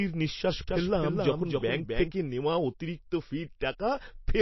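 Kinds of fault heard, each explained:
MP3 compression: the speech sounds watery and swirly throughout, with smeared attacks and nothing above about 5.8 kHz, likely from low-bitrate MP3 encoding near 28 kbps. On a spectrogram the top is cut flat and weak components flicker on and off between frames.
Doubled audio track: from 0.68 to 2.12 s a second full-band copy of the speech runs about 300 ms behind, roughly 5 dB quieter, likely a duplicate path or misaligned edit. The waveform shows repeated shapes offset by that gap, starting and stopping abruptly, without reverberant decay.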